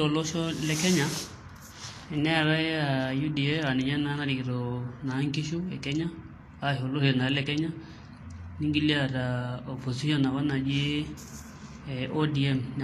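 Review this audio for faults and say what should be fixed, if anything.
Throughout the speech, treble is hissy and grainy with nothing above 14.2 kHz, likely Vorbis compression at a low bitrate, around 33 kbps. Coarse quantisation turns fine high-frequency detail into noise. Encode at a higher Vorbis quality setting, or keep a lossless copy.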